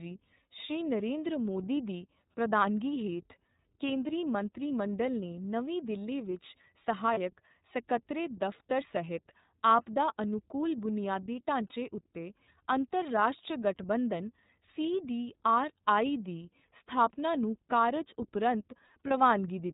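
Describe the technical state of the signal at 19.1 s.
Right after "ਨੂੰ ਕਾਰਜ ਉਪਰੰਤ", from 19.07 to 19.11 s, there's a lost iLBC frame. The decoder repeats the last pitch cycle with some noise, so you hear a brief buzzy held vowel. The speech snaps back almost immediately, because each iLBC frame stands alone; here a single 30 ms frame was dropped.

Underneath that, the whole clip runs through the iLBC codec in its 30 ms frame mode. It's band-limited to 4 kHz with a plainly audible rough, synthetic edge.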